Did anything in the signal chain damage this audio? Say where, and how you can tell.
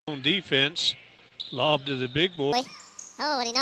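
Yes, two stages damaged it. Repeated stalls (stutter) run from 1.17 to 2.39 s: eight brief hangs, the longest 23 ms, about 95 ms in all, with nothing lost. The jitter buffer kept running dry on late packets and stretched the last sound until data arrived.

A section at the wrong speed runs from 2.53 s to the end: playback is 1.62 times too fast, so pitch jumps about seven semitones while everything hurries. The cause is likely a clock mismatch at playback or in editing.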